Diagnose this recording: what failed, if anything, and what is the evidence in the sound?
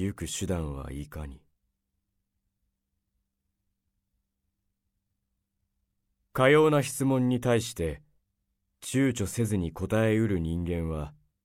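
Nothing failed: there are no dropouts, clicks, clipping, hum or timing glitches anywhere in the recording, and no stage in the chain gives any sign of a fault.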